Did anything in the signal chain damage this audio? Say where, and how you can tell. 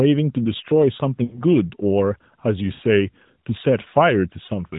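Yes, frames were lost on the network side of an AMR narrowband mobile call. The decoder concealed them by repeating the last good pitch and vocal-tract settings at falling gain. At 1.24–1.43 s and 2.74–2.82 s the sound is drawn out and sags, which fits runs of roughly four and three 20 ms frames. A briefer dip at 4.46–4.50 s fits a single lost frame. The narrowband codec itself passes nothing above 4 kHz.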